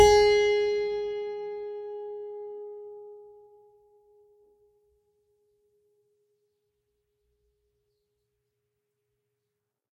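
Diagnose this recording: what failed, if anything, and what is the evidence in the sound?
Nothing failed in this music.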